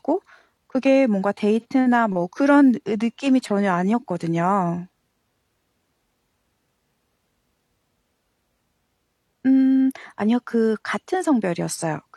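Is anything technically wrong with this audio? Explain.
Yes. At 1.60 to 1.66 s, this speech has a short AAC frame loss with concealment. About 43 ms of coded audio is missing, which fits a single lost frame. The decoder covers the hole by reusing the last good spectrum with altered phase or smoothed energy. The result is a brief smeared, noisy or phasey patch. A plain dropout would leave silence or a click; here the gap is filled, and too short to fade out.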